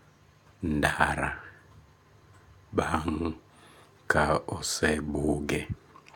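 No audible technical faults: no dropouts, clicks, distortion or level jumps anywhere in the speech.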